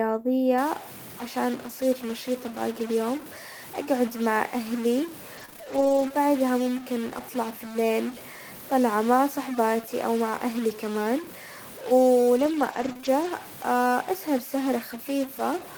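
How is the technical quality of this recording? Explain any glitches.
The technical quality is poor: a distortion runs through nearly all of the speech, and two stretches have dropouts patched over by packet-loss concealment.

From 0.58 s to the end, a stuck-bit distortion sits on the speech, and pauses fill with hiss. The likely cause is one data bit fixed at 0 or 1, shifting roughly half the samples by its weight. On a spectrogram this appears as broadband noise across quiet gaps, and the waveform shows stepped offsets.

Between 5.37 s and 6.19 s, repeated packet loss gives a choppy, robotic texture. Six gaps, the longest 25 ms, were each filled by extending the preceding sound, covering about 12% of that span. A spectrogram shows repeated smeared, frozen slices, and the waveform shows short looped segments.

From 12.37 s to 13.29 s there are scattered short gaps, roughly three of them, each around 20 ms at most, concealed the same way. 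They come across as brief hiccups or smears in the speech, visible as isolated blurred columns on a spectrogram.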